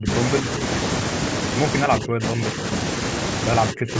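Speech suppressed in double talk breaks up this speech at 0.0–0.1, 0.42–0.61, 1.85–2.65 and 3.72–3.95 s. The voice dips or cuts out in pieces, nearly vanishing at the start, only slightly at 0.42 s. This is likely an echo canceller muting the talker while the far side spoke.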